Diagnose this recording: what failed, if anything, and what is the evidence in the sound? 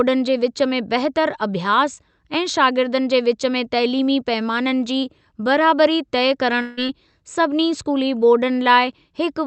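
The failure sits at the network stage, most likely a long network dropout on the call's Opus path, whose top end stops near 8 kHz. From 6.61 s to 6.79 s the speech gives way to a buzz or hiss continuing the last sound that fades without reaching silence. When speech resumes, about 160 ms of it is gone. With no packets arriving, the receiver's concealment extended the final frame for roughly 160 ms, and the lost stretch was never played.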